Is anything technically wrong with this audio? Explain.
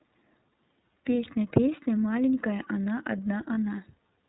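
Yes, there are two problems. The whole speech clip passes through the iLBC codec. The sound is bandlimited, with nothing above 4 kHz, and it has a plainly audible rough, slightly synthetic texture. iLBC codes each frame's excitation independently, and the damage here fits its 13.33 kbps mode with 30 ms frames. The narrowband filtering removes sibilance and air, and the coarse excitation modelling makes the voice sound buzzy and processed.

Lost iLBC frames appear between 3.54 and 3.58 s, a 30 ms gap consistent with one missing frame. The decoder covers the hole by repeating the last pitch cycle with some noise mixed in. This produces a brief held, faintly buzzy vowel-like smear instead of a dropout. Because iLBC frames don't depend on earlier ones, the voice comes back cleanly right after the gap.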